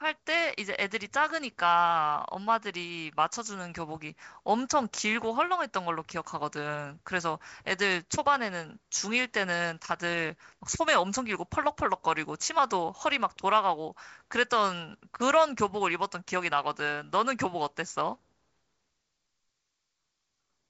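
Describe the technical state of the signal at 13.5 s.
At 13.5 s the speech is intact, with no fault at that moment; it passes through G.722 wideband telephone coding at 56 kbit/s, which leaves light coding grain and no content above about 7.7 kHz.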